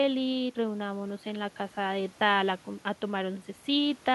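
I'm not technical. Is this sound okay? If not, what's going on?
Yes, no faults turn up anywhere in this speech recording.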